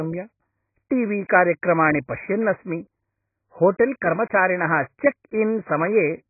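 Throughout the speech, nothing is heard above 2.5 kHz. The sound is dull and muffled. Sibilants lose their edge and turn fizzy. Sustained sounds warble. The damage is heavy. This is likely AAC compression, with the AAC-LC coder starved of data. To save bits, it lowers the cut-off and quantises the remaining bands coarsely against its hearing model. The narrow band and the smearing point to a very low bitrate, around 12 kbps.

At 1.28 s, just after "टी वी", there is pre-echo. A brief hiss comes before a sharp attack. It spreads about 12 ms ahead of the onset. The attack itself sounds soft and smeared. The codec spreads its quantisation noise evenly across a whole block. This attack falls late in its block. The noise sized for the loud onset therefore also fills the quiet moment before it.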